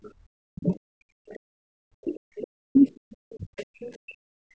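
Background gated by the echo canceller, 0.00 to 0.11 s: while the loudspeaker played, the canceller clamped the microphone, so the room sound dips by about 25 dB for roughly a tenth of a second.

Speech suppressed in double talk, 0.39 to 0.75 s: with both sides talking, the canceller likely could not separate the talker from the echo, and the speech sinks by as much as 40 dB.

Other side's voice leaking through, 0.75 to 0.79 s: a faint scrap of a second voice, about 35 dB below the speech, is likely residual echo the canceller failed to remove.

The same pattern repeats. The speech is pushed down again from 1.14 to 1.46 s, with a trace of the other voice at 1.31 to 1.37 s, about 30 dB down. A long suppressed stretch runs from 2.00 to 4.51 s, totalling roughly one and a half seconds of ducked speech. Inside it, leakage appears at 2.75 to 2.79 s, about 30 dB down, and most clearly at 3.57 to 3.90 s, where the other voice sits only about 20 dB below the speech.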